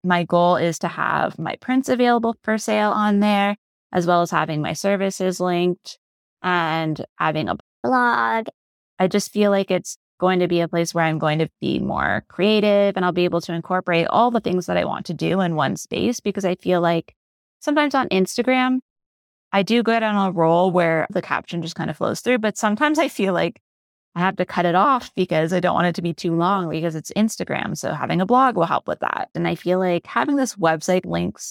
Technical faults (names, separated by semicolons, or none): playback stall; catch-up at higher speed